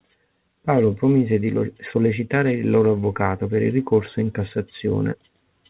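Clock drift between sender and receiver runs through the whole speech clip. The sender's audio clock is running around 4 percent faster than the receiver's, so more audio arrives than the receiver plays out and its jitter buffer keeps creeping fuller. Unlike random network jitter, which would sometimes starve the buffer and sometimes flood it, this pressure always points the same way. That steady one-sided excess gives the cause away.

From 0.06 s to 5.51 s, the receiver answers with repeated timing corrections, trimming short slivers out of the stream to hold its buffer in check. The net effect is playback at about 104 percent speed, heard, if at all, as small hiccups at uneven intervals or a slightly unsteady tempo. Packet loss would instead leave gaps, smeared fills or repeated fragments. Here every edit removes audio, none adds any, and the band stops cleanly at 4 kHz, as the G.711 mu-law call path limits it.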